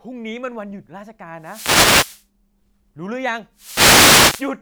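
From 1.39 to 2.26 s and again from 3.54 to 4.54 s, wireless microphone noise hits occur. The radio link fades as reflected paths cancel, so receiver hiss swells over the speech as a swish of static. On a spectrogram, broadband noise fills in; the waveform's noise floor thickens.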